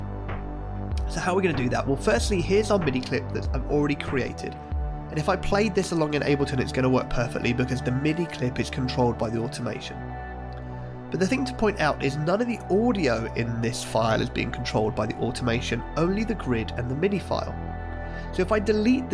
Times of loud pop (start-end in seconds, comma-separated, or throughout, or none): none